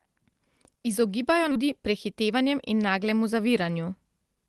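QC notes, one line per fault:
1.51 s, skip ahead: playback jumps forward with no gap, losing around four tenths of a second of speech that was discarded while later audio was already queued. Unlike a dropout, there is no silence or concealment fill, just an abrupt splice between both sides.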